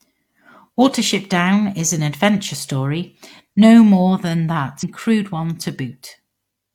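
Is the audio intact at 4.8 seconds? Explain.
No. From 4.79 to 4.84 s the speech jumps ahead with a small blip, likely a stream segment skipped after one segment failed to load.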